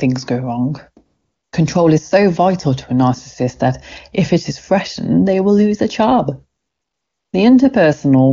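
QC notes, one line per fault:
1.05–1.51 s and 6.59–7.33 s, AMR comfort noise: the sending phone judged the talker silent and stopped transmitting speech frames for about 460 ms and then 740 ms, so the receiver generated its own noise from a rough estimate of background level and spectral shape. The real room sound drops out and a steady, smooth hiss switches in, then switches back out when frames resume. Around these gaps the AMR-WB path at 23.85 kbit/s leaves little or no audible damage.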